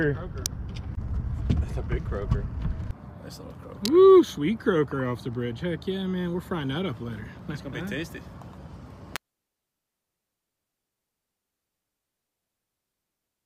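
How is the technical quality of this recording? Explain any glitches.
Three sharp snaps cut through the recording. Electrical switching spikes occur at 0.46 s, from 3.85 to 3.88 s, and at 9.16 s, each peaking around -5 dBFS. They are likely arcs from a nearby switch or motor coupling into the audio line, heard as abrupt clicks over the sound.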